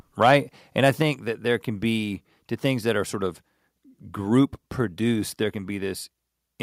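From 0.22 to 0.36 s the speech shows microphone overload: peaks run about 2 dB past the converter's limit, with a small fraction of samples flattened. The likely cause is input gain set too high for the converter, giving a harsh, crackly edge to those syllables.

At 1.02 s, just before "that there can be", a microphone volume step-down drops voice and background together by about 4 dB, likely the call software reducing device gain after that overload. A smaller step of about 1 dB follows at 5.43 s, right after "group produced".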